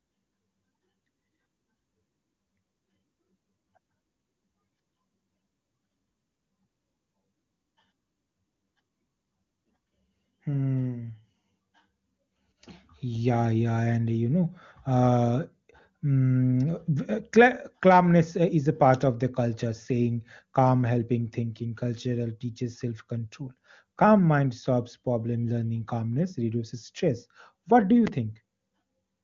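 A speech clip with a single sharp loud pop from 28.07 to 28.1 s, jumping roughly 10 dB above the speech, which continues underneath. It is likely a brief voltage spike from a switch, plug or static discharge. The sound is carried through the AMR wideband (HD Voice) codec at a rate that fits 23.85 kbit/s, with little or no audible coding damage.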